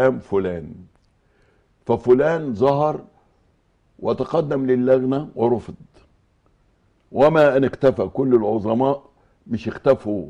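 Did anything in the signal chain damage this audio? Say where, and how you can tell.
Yes. Hard clipping at the converter or gain stage: peaks exceeded full scale by about 1 to 5 dB and were cut flat at 0.05, 1.91–2.14, 2.66–2.70, 4.92–4.94, 7.21–7.90, 8.34 and 9.89–9.92 s. The flattened tops add high harmonics, heard as crackle, harshest at 7.21–7.90 s.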